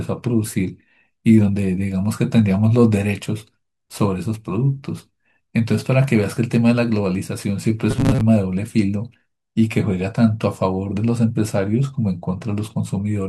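Robotic sound from repeated short buffers, 7.91 to 8.21 s: the speech turns into a rigid, metallic buzz at 133 Hz. Audio likely arrived too seldom, so about half that span was filled by looping a roughly 7.5 ms stretch, whose repetition fixes that pitch.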